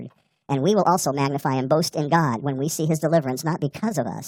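Throughout, the speech runs one and a half times too fast and sounds about seven semitones high. This is a wrong sample rate, which fits 32 kHz audio played back unconverted at 48 kHz.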